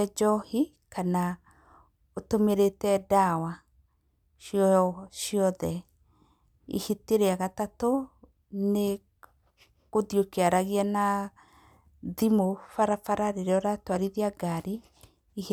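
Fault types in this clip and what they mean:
No faults to list here: the speech comes through without anything going wrong along the way.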